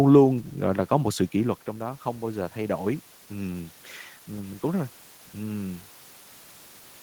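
From 1.0 to 3.73 s, automatic gain rising: after the input fell about 9 dB, gain climbs about 4 dB, swelling voice and room noise together.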